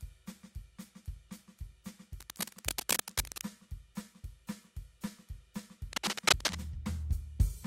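From 2.20 to 3.42 s, a dense, uneven scratching rustle sits over the music at about the same loudness. A shorter burst from 5.93 to 6.55 s is clearly louder than the music. Both sound like cable scratch noise, likely from a worn cable, connector or control being moved. The contact resistance jumps rapidly as it shifts, so irregular crackling bursts ride on top of the signal for as long as the movement lasts.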